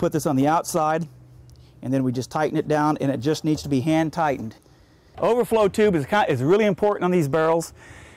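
Hard clipping runs through the whole clip: the level is driven about 3 dB past what the stage can pass, so the highest peaks, around one percent of samples, are sliced flat. Those squared tops add upper harmonics heard as brief crackle on loud moments.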